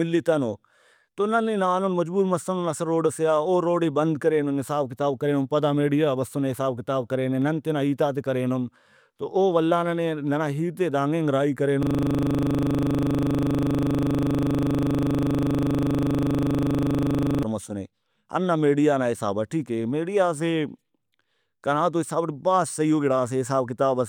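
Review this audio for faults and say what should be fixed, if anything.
System hang loop, 11.83 to 17.43 s: a frozen driver left the hardware replaying one 40 ms slice of speech, producing a rigid 25 Hz stutter. Prevent it with a watchdog that mutes or clears the output buffer when the audio thread stops refilling it.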